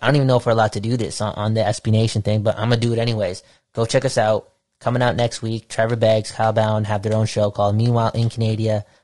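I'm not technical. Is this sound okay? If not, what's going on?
No, not quite. All the way through, the speech sounds rough and grainy, with hiss sitting between the tones of the voice and an artificial top end. That's most likely low-delay AAC compression, the quick-response squeezing used for video calls.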